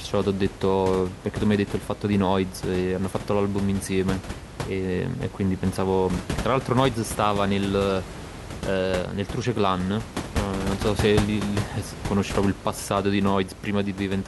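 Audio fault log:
Nothing stood out on listening to this speech; the only background is the room's own noise, sitting about 10 dB below the voice.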